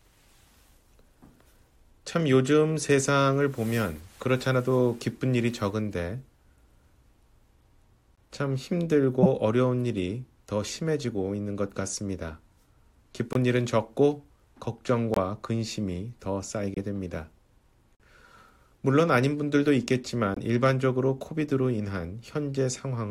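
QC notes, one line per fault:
8.15–8.19, 13.33–13.37, 15.14–15.18, 16.74–16.78, 17.95–18.01, 20.34–20.38: corrupt frame muted. Each is a short, sharp dropout of roughly 35 to 60 ms. The decoder rejected damaged frames and the player filled the gap with silence. Most gaps fit a single frame; the longer ones point to a few in a row.
9.22–9.26: corrupt frame decoded. There's a brief, loud glitch peaking around -5 dBFS, about 30 ms long. A damaged frame got decoded anyway, so bad gain or spectral data sprayed energy at the wrong frequencies for roughly one frame.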